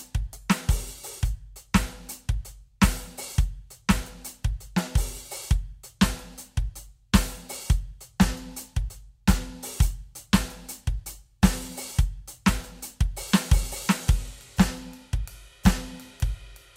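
No technical faults are audible.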